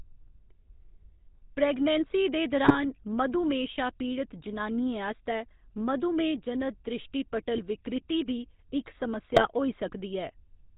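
Throughout, the speech carries GSM full-rate codec damage. Pulse-driven vocal-tract modelling cuts everything above 4 kHz and leaves a plainly buzzy, gravelly roughness, consistent with the 13 kbps full-rate mode.

GSM bit errors corrupt the decoded filter, pitch or gain values at 2.64–2.81 s after "प्रेग्नेंसी दे", 4.96–4.98 s, 7.57–7.63 s before "विकृति बी इक", and 9.30–9.47 s after "विकृति बी इक", each causing brief squawks, pops and gargling.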